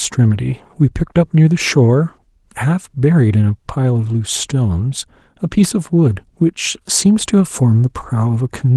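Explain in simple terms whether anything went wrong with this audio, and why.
Nothing went wrong with this audio, because no fault can be heard anywhere in it.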